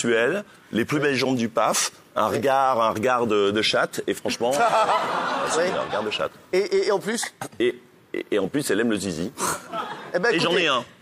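No technical faults are audible anywhere in the recording.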